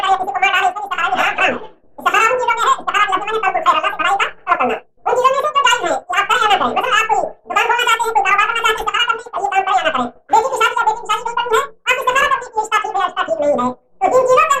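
From start to finish the audio was read two samples at a time, so everything runs at double speed, an octave up.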